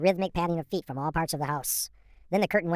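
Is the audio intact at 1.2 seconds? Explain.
No. At 1.2 seconds, as throughout, the speech has a wrong sample rate: it runs 1.45 times fast and about 6.45 semitones high, which fits audio recorded near 22 kHz played at 32 kHz. Tempo and pitch rise together, unlike a pitch shift or time-stretch.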